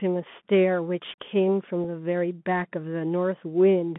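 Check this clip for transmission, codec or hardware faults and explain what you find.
Two faults stand out: the whole clip is coded through a Bluetooth CVSD headset link, and there is one brief unconcealed packet loss.

Bluetooth CVSD headset codec, throughout: the speech is sent as one up-or-down bit per sample with an adapting step, consistent with a 64 kbps link. The band sits between about 150 Hz and 3.5 kHz. Sharp, loud sounds outrun the step and distort, sibilants turn scratchy, and a granular hiss lies underneath.

Unconcealed Bluetooth headset packet loss at 1.84 s: about 3.8 ms of audio, roughly a single packet, went missing between headset and phone. Nothing was filled in, so a tiny abrupt hole appears with hard edges.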